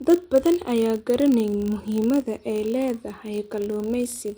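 A filter restarted on every block, losing its state each time, throughout this speech recording, so a level-tracking buzz at 50 Hz runs underneath, consistent with 20 ms blocks.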